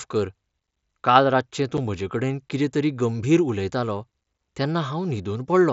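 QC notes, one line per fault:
1.77 s, unconcealed Bluetooth headset packet loss: right after "काल रातचें" the speech has a tiny hole of silence with hard edges rather than a fade. A headset packet went missing and nothing filled the gap. The gap's length fits a single 7.5 ms mSBC frame.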